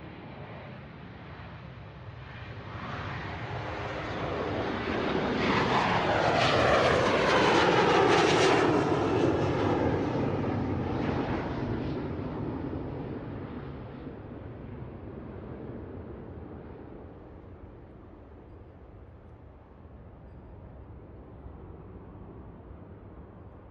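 No technical faults are audible anywhere in this recording of sounds.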